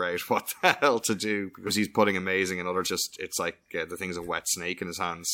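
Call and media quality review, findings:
Compressed frames skipped, decoder side: whole coded frames missing or rejected as damaged, so playback jumps ahead. Speech loses roughly a second at 1.66–1.70 s and about 0.7 s at 2.86–2.88 s. Each gap is consistent with about 20 and about 15 frames of 42.7 ms each.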